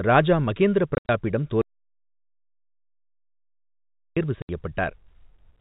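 Right after "ராஜா மகேந்திர", from 0.95 to 1.09 s, you get packet loss filled with silence: 120 ms knocked out in scattered holes, the longest run 70 ms, with hard edges. The spacing fits 10 ms packets. It happens again from 4.42 to 4.49 s as one clean 70 ms hole.

In between, from 1.62 to 4.17 s, there's an audio dropout to silence, about 2.55 s of dead silence with no room tone at all. It's likely the input cut out while the recorder kept writing. Under the narrowband G.711 telephone sound, the speech just vanishes and snaps back.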